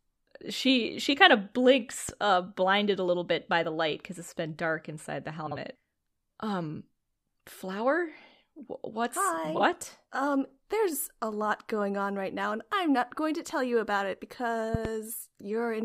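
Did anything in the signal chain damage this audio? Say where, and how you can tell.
Yes. There are loud pops at 2.09 to 2.11 s and 14.75 to 14.88 s, peaking about 10 dB and about 15 dB above the speech. The second is a double pop. The speech continues underneath. This points to the analogue or converter stage, likely a switching or static voltage spike.

Frames out of order occur at 5.47 to 5.56 s and 9.55 to 9.61 s. Each is a short garbled flutter. The halves are swapped in blocks of 46.4 ms and 23.2 ms, which fits reordered codec frames from network or storage.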